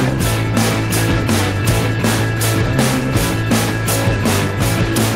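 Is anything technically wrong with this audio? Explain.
No, nothing in the signal points to a technical fault; it holds steady throughout with no audible disruption to its level, timing or continuity.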